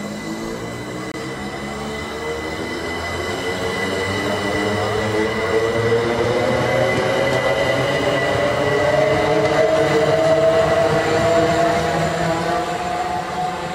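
A Bluetooth dropout cuts the audio to silence from 1.12 to 1.16 s, and the sound resumes further along as though it had kept playing. The likely cause is a wireless packet arriving too late to play, which fits losing about 23 ms of audio.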